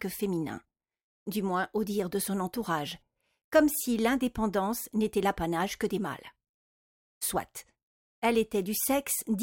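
No technical faults can be heard anywhere in this recording.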